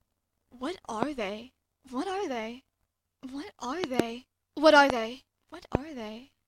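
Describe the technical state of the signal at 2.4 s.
At 2.4 s the signal is intact, with no dropout, distortion or other fault audible at that moment.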